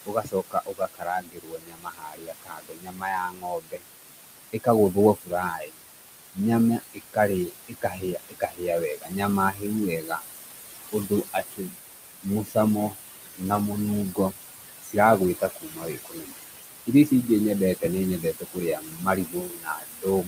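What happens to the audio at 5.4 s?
Speech cut by the noise suppressor, from 4.53 to 5.78 s: the suppressor mistakes quiet speech for noise and pulls it down by up to about 22 dB, so around 0.7 s of sound comes out swallowed and faint. Noise suppressor artifacts also run throughout, with the background lowered by about 19 dB frame by frame, so the noise sinks between the words and rises under them.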